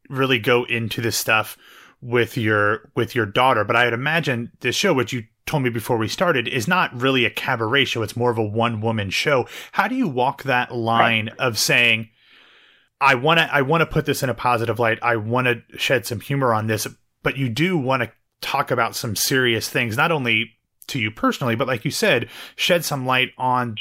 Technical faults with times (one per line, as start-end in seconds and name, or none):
none